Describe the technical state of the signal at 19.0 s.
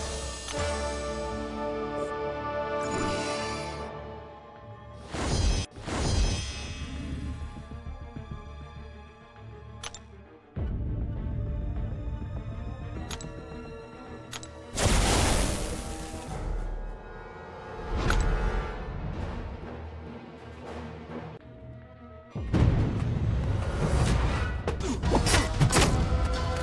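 At 19.0 s the sound runs about 9% fast and sits roughly 1.5 semitones sharp, a shift that holds from 12.95 s to the end. This is a wrong sample rate fault: the ratio fits 22 kHz samples played back unconverted at 24 kHz.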